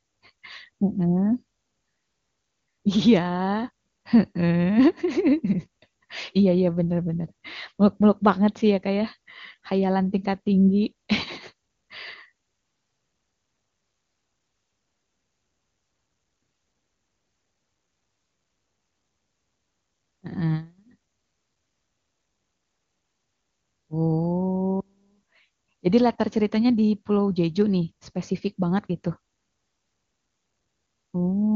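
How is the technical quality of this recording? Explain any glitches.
Nothing here counts as a glitch; the speech comes through the AMR wideband (HD Voice) coding at 23.85 kbit/s sounding clear, with nothing jumping out along the way.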